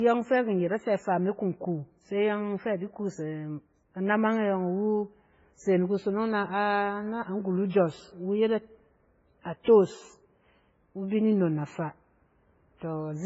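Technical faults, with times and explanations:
Throughout: transcoding between lossy codecs. The speech was likely encoded at a very low MP3 rate, which fits about 16 kbit/s, then re-encoded as WMA. Both codecs' smearing and swirl are heard together, with nothing above 7.6 kHz.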